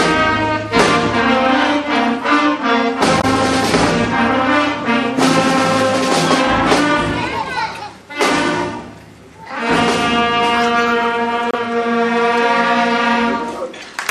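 Damaged data in the compressed stream shows up at 3.18–3.24 s, 11.51–11.54 s and 13.81–13.84 s: corrupted frames make the decoder lose sync, giving brief glitches heard as a chirp, squawk, click or short hole.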